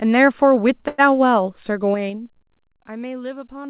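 From 0.88 to 1.00 s there is a call audio freeze: the last sound is held as a brief buzzing drone for about 100 ms, then the audio resumes where it stopped, with nothing lost but everything after shifted later. The likely cause is delayed packets draining the jitter buffer. On a spectrogram the held sound appears as flat horizontal bands; the waveform shows a repeating, decaying pattern.

From 1.86 to 2.74 s the level drops by roughly 15 dB in unsmoothed 3 dB steps, about seven per second, producing zipper noise heard as a ticking over the sound. The waveform envelope forms a staircase, and each step shows on the spectrogram as a thin vertical click line, cut off at 4 kHz like the rest of this narrowband call audio.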